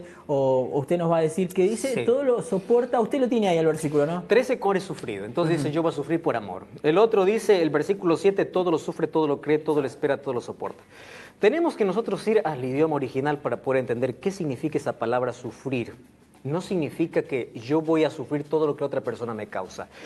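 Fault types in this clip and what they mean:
Skip ahead: At 4.63 to 4.65 s the sound jumps forward with no gap. Roughly 0.7 s of audio never plays. It was lost on the way or thrown out when the jitter buffer overflowed while later audio was already queued. The two sides of the cut are joined almost directly. So the sound lurches ahead mid-stream instead of pausing. The delay drops by about the same amount in one step.
Jitter buffer speed-up: From 5.21 to 5.61 s the sound runs at about 111% speed. The pitch stays the same. The buffer was holding more audio than its target. To catch up, the receiver cut many short pieces, each one or a few pitch periods long. Together they add up to roughly 50 ms. The passage sounds briefly hurried and rushed, just after the skip. The Opus call codec's cutoff near 12 kHz stays steady throughout.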